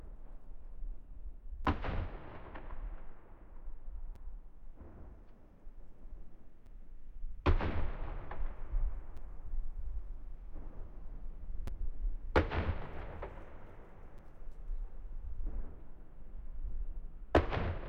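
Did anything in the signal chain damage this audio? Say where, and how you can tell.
Yes, there's a gap between chunks at the chunk-joining stage, around 1.65, 4.16, 6.66, 9.17, 11.67, 14.18 and 16.69 s. Each is a hard-edged hole of about 6.5 ms recurring every 2.5 s. The sound is delivered in 2.5 s blocks with brief silence inserted at each join, so nothing's lost, just interrupted.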